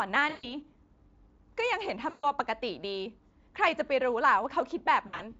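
At 0.29 to 0.56 s, 2.09 to 2.26 s and 5.07 to 5.30 s the speech shows VoIP packet loss concealed by the speech codec. The first two gaps cover about 140 ms each, which fits seven lost 20 ms frames. The last is shorter, scattered losses whose longest run is about 60 ms. The decoder stretches the last pitch into a buzzy tone or coloured noise that fades instead of silence, and the voice stays weak briefly afterward, unlike a clean dropout. The Speex coding underneath stays light.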